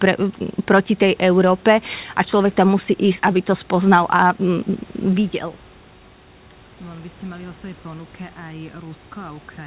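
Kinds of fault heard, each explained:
No faults are present; the level moves smoothly, room noise sits about 32 dB below the speech, and the call path's G.711 mu-law coding at 64 kbps leaves nothing above 4 kHz, as expected for that codec.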